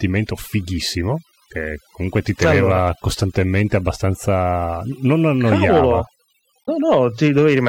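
Overdone noise removal affects the speech from start to finish. The noise reducer was set too aggressively, so any frequency band whose level sits close to its noise estimate is pushed far down or switched off entirely. Low-level parts of the speech fall under that threshold and are removed along with the noise. The background drops to near silence dotted with twinkling specks.

From 6.61 to 6.69 s there is damaged data in a compressed stream. For roughly 70 ms the encoded data is corrupt, whether lost, zeroed, overwritten or mixed with foreign bytes. The decoder misinterprets or rejects the affected frames, loses synchronisation and hunts for the next valid frame header. The result is a short chirp, squawk, click or hole at that point, distinct in character from the steady processing artefacts around it.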